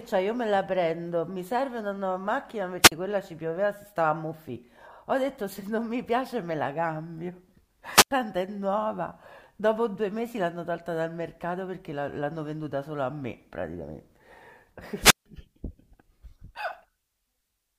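At 2.81 to 2.92 s, 7.90 to 8.11 s and 15.00 to 15.26 s the speech breaks up with a wireless microphone squelch dropout. The FM radio link fades, hiss swells, and the receiver's squelch cuts the output, leaving holes of about 30, 91 and 153 ms that lengthen each time. On a spectrogram each shows a brief broadband noise smear, then a blank vertical gap. The waveform flattens to near zero there.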